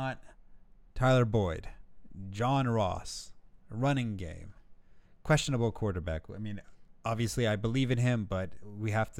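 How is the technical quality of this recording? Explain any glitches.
The technical quality of this recording is good, with no glitches to explain.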